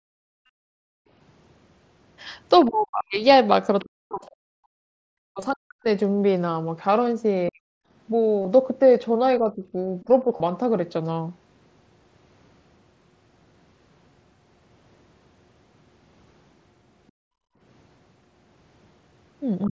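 From the start to 1.08 s the background is gated by the echo canceller. While the far end plays through the loudspeaker, the canceller pulls the microphone down hard, by about 38 dB at its deepest. The room tone sinks away for roughly a second and comes back as the canceller releases. The same gating returns from 4.77 to 5.02 s, about 40 dB deep for some 300 ms, and from 17.11 to 17.6 s, about 37 dB deep for about half a second.

At 0.46 s there is concealed Bluetooth headset packet loss lasting 30 ms. Audio between headset and phone went missing. The receiver filled the gap by repeating the closest-matching recent stretch of waveform. The result is a short buzzy, held tone with a slight warble as real speech resumes. It recurs at 2.98 s for 22.5 ms, at 5.40 s for 15 ms, at 8.42 s for 30 ms and at 10.37 s for 30 ms. Those lengths fit runs of two to four 7.5 ms frames.

From 2.66 to 5.87 s the speech is suppressed, likely by double talk. 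With both sides talking, the canceller could not tell the talker from the loudspeaker echo, so it turned everything down. The voice dips and breaks up in pieces, about 40 dB at worst, over roughly one and a half seconds in total. Shorter dips follow at 7.49 to 7.75 s, around 40 dB, and from 9.39 to 10.25 s, about 15 dB. A final clipped dip of about 20 dB comes at 19.69 s, at the very end.

From 3.79 to 3.85 s a brief scrap of the other side's voice leaks through, likely as echo the canceller failed to remove. It sits about 25 dB below the talker. The mSBC headset path carries speech up to 8 kHz.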